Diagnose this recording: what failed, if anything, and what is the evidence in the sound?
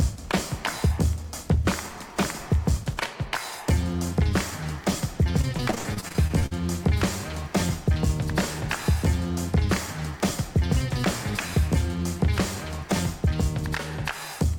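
Network: repeated packet loss (robotic sound), 5.41–6.53 s. About a dozen holes up to 61 ms are patched by repeating earlier audio, showing as frozen, smeared spectrogram blocks.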